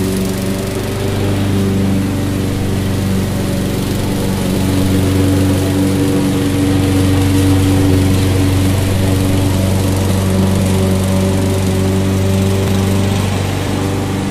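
Four spots where the audio jumps straight ahead with no gap, at 4.55, 10.59, 12.68 and 13.68 s. The first two lose something like 20 ms, the last two nearer 50 ms. That's likely a dropped buffer (overrun), where samples got overwritten before being read.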